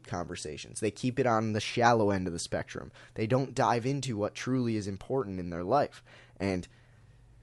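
Nothing goes wrong technically anywhere in this bit of speech, so there's no fault to walk through here.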